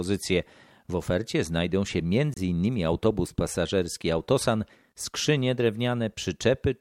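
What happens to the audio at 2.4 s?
Just before that point, from 2.34 to 2.38 s, damaged data in the compressed stream makes the decoder misread corrupted frames and lose sync, producing a brief glitch. On a spectrogram it shows as a 44 ms disruption; the waveform shows an abrupt discontinuity.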